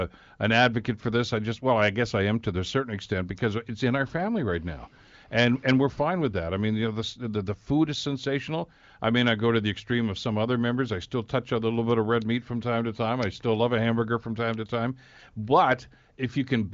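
No technical faults can be heard in this speech recording. It carries the band-limited character of the AMR wideband (HD Voice) codec, with nothing above about 7.5 kHz, and any coding damage is faint at most, which fits one of the codec's higher bitrates.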